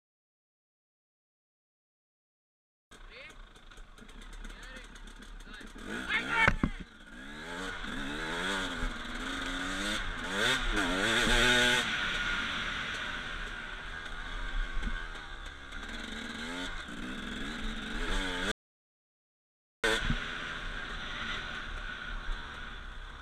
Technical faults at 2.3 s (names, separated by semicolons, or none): none